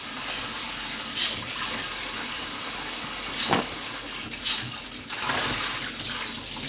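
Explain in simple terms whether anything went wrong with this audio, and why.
Nothing went wrong: the sound comes over a phone-style call connection that carries nothing above 4 kHz, which is simply how such a line sounds, and no fault turns up anywhere in it.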